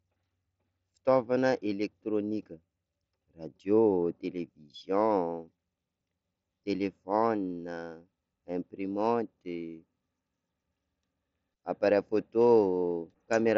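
No technical faults are present.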